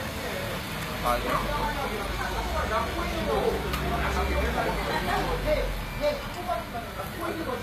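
A low-bitrate file, likely encoded earlier with a codec such as HE-AAC at around 24 kbit/s, was re-encoded as a high-bitrate MP3 in the region of 313 kbit/s. The result is low-bitrate audio saved at a high bitrate: this recording of sounds stays band-limited throughout, with nothing above 14.9 kHz, because the larger second encoding cannot restore detail the first one discarded. The earlier losses remain audible across the whole clip.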